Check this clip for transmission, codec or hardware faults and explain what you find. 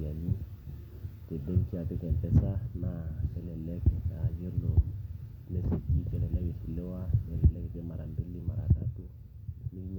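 Checking the clip turns up no faults to explain.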